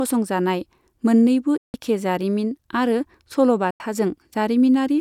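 Speech with two Bluetooth dropouts, likely from audio packets reaching the headphones too late and being discarded. The output cuts to silence from 1.57 to 1.74 s (about 160 ms) and from 3.71 to 3.80 s (about 90 ms), then resumes further along as if it had kept playing.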